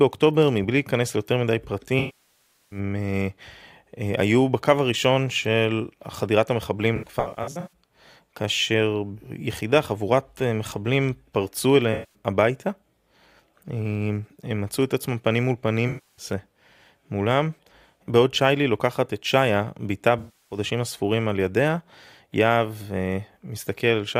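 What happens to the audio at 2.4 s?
At 2.4 s the speech is inside a patch of AAC frame loss with concealment running from 1.99 to 2.79 s. About 0.73 s of coded audio is missing, which fits a run of a few dozen consecutive frames. The decoder covers the gap by reusing the last good spectrum. It starts as a smeared, noisy hold of that spectrum, then decays toward silence because the loss is long, and fades back in as real frames return.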